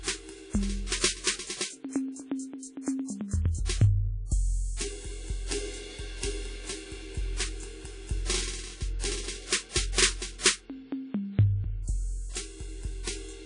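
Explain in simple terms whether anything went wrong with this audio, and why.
WMA compression, throughout the music: the sound is ringing and washy with nothing above 10.1 kHz, likely because a low-quality encoder discarded weak detail to save space.

Pre-echo, from 9.92 to 9.98 s: a short hiss creeps in about 59 ms before a sharp attack, because the encoder smeared that attack's noise backwards.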